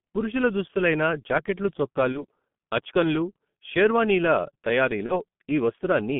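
Throughout, the speech sounds muffled and hoarse, with blurred consonants and nothing above about 3.5 kHz or below about 150 Hz. This is heavy G.723.1 codec damage, consistent with its 6.3 kbit/s mode. The codec squeezes each 30 ms frame into a handful of parameters and a slowly updated voice model, so rapid changes in the speech smear together and the fine texture turns rough.

From 2.12 to 2.26 s, just before "అచ్కన్లు షెర్వానీల", the sound briefly stretches out and fades, and then takes a moment to regain strength. The same thing happens again from 5.06 to 5.24 s. Both are VoIP packet loss concealed by the speech codec. Each gap fits a single lost 30 ms frame. The decoder kept repeating its last pitch and filter at falling gain, and because every frame builds on the previous one, the speech stays weak or distorted for tens of milliseconds or more after the loss.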